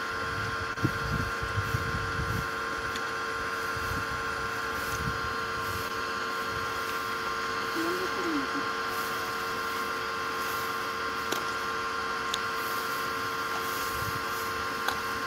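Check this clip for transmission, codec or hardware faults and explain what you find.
Two transmission faults are present. Short concealed packet loss occurs at 0.73–0.78 s and 5.88–5.91 s. About 20 ms of audio never arrived, and the receiver extrapolated the preceding sound to bridge it, heard as brief smears.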